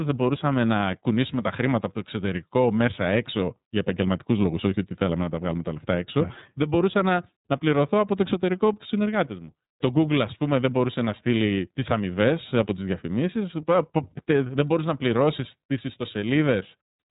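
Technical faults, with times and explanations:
Throughout, iLBC codec: nothing passes above 3.8 kHz, and the speech sounds rough and synthetic, unlike a clean low-pass, which fits independently coded 30 ms frames.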